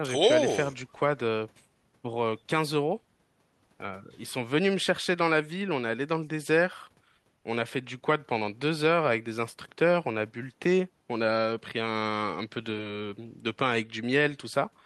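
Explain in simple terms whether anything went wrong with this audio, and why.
Nothing went wrong with this audio, because no technical fault can be heard anywhere in the recording.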